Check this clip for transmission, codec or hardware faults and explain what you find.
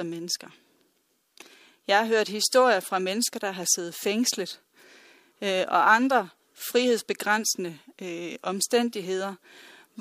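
Nothing in this clip points to a transmission, codec or hardware fault. There is nothing here that calls for an explanation.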